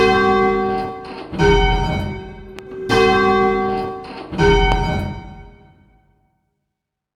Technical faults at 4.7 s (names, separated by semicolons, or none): loud pop